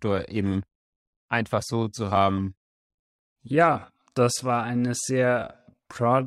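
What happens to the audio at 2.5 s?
At 2.5 s you're inside a time-stretched section running from 1.61 s to the end, slowed to about 0.71× speed. The pitch holds but the pace drags, likely from software repeating short pieces to lengthen it.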